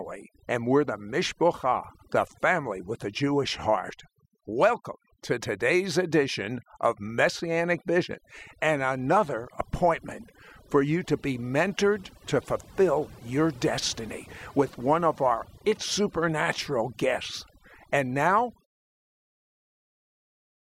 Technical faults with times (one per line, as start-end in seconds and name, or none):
0.00-20.62 overdone noise removal